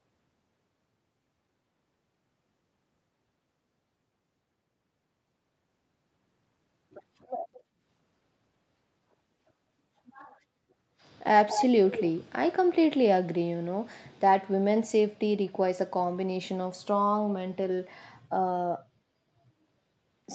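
At 7.53 to 7.63 s a very faint delayed copy of the speech surfaces, and at 11.48 to 11.67 s a much stronger one, nearly as loud as the speech. Both arrive 211 ms late, likely an echo leak from a loudspeaker the canceller missed. On a spectrogram they appear as shifted duplicates of the speech harmonics under the 8 kHz ceiling of the call path.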